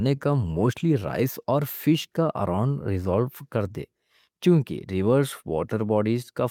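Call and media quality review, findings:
Clock drift between sender and receiver, throughout: sender clock runs roughly 1.5% slow relative to receiver. Jitter buffer keeps draining; receiver must fill gaps to avoid underrun. Symptom: uneven micro-hiccups across the speech, no steady rhythm to them.

Repeated timing corrections, 0.16–5.68 s: receiver stretching playout to about 99% speed, repeating short slivers of audio, all in the same direction, unevenly spaced. Roughly 70 ms added in total. Heard as faint stutters and a slightly unsteady tempo.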